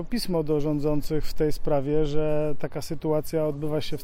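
Nothing stood out as technically wrong on listening to the audio.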